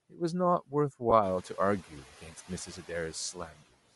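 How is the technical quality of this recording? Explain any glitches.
The speech carries a constant coding grain and has several brief dips and one short smear. The room noise steps up by about 14 dB around 1.0 s and then sits about 21 dB below the speech.

Throughout, the speech has a breathy, grainy top edge, likely from Bluetooth LC3 compression, which replaces the upper spectrum with noise. The sound fits about 48 kbps with 10 ms frames. Unlike the other faults, it never comes and goes.

At 1.10 to 1.13 s, lost LE Audio frames leave a 20 ms noisy smear where the decoder repeated the last spectrum with scrambled phase. This fits two 10 ms frames. It is a texture smear, not a level drop.

Speech cut by the noise suppressor occurs at 0.1 to 0.2 s (about 11 dB), 1.88 to 2.5 s (about 14 dB), 2.66 to 2.9 s (about 10 dB) and 3.33 to 3.72 s (about 16 dB). The suppressor mistook soft speech for noise, so the speech turns faint and swallowed.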